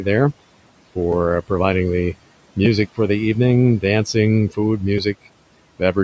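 At 1.12 s, just before "providing the", a repeated buffer occurs: the next block of audio arrived late, so the device replayed the previous one, which fits a 5 ms buffer. The same fault recurs at 2.65 s, between "providing the" and "for the evening dancing", with two extra plays, and again at 4.98 s. Each time the hard joins of such a short repeat are heard as a sharp click or tiny buzz.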